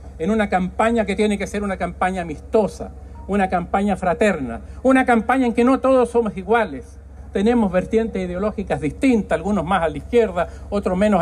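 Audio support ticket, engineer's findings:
No faults found on playback.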